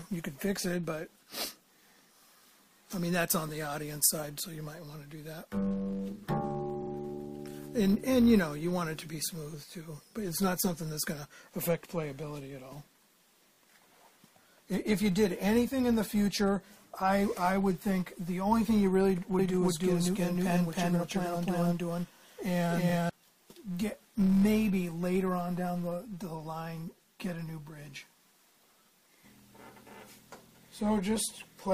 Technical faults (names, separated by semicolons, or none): filter restarted on every block; repeated frames; doubled audio track